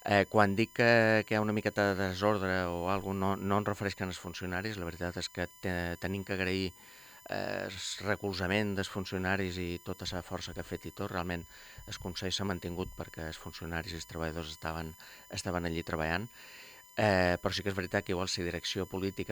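A USB whine runs through the whole recording, a fixed-pitch tone built on 1 kHz with its harmonics stacked above it. The strongest component sits at 17 kHz, and the whine lies roughly 25 dB below the wanted audio. Current drawn by the bus in 1 ms frames leaks into the power or ground of the audio circuit. A spectrogram shows evenly spaced horizontal lines at 1 kHz multiples spanning the clip, brightest at 17 kHz.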